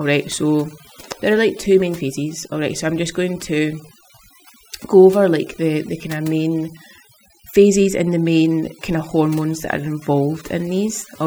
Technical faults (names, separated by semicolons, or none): overdone noise removal